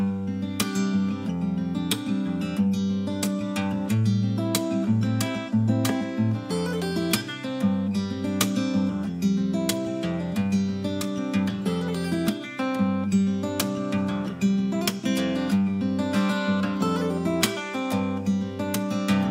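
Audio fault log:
Nothing stood out on listening.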